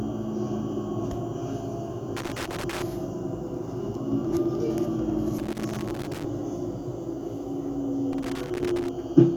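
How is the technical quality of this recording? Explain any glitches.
A loose connector crackle breaks up the recording three times, at 2.17–2.82 s, 5.38–6.25 s and 8.13–8.89 s. A worn or dirty contact keeps making and losing connection, chopping the signal and adding clicks, so each stretch of sound turns into an irregular burst of scratchy crackle.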